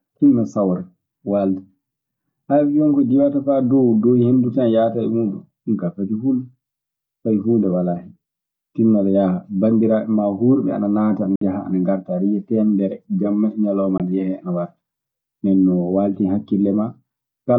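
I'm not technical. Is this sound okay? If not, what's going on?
No. The speech has two brief gaps, most likely from a Bluetooth dropout, where bits of audio didn't reach the headphones in time and were thrown away. The first gap, from 11.36 to 11.42 s right after "hurɓe ana naata ana", lasts about 56 ms. The second, from 13.98 to 14.00 s after "teemedere jamma e ñalooma", is about 19 ms, just before "ana yehee ana". Each time the sound cuts out and resumes as if it had kept playing.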